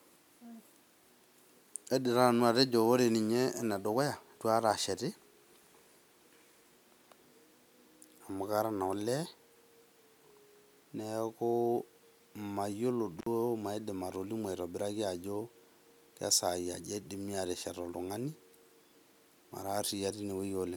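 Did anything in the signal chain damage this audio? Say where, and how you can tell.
Yes: at 13.17 to 13.26 s, just before "maidim atolimu", the speech cuts out with crackle, an intermittent contact, a loose analogue connection opening for about 59 ms.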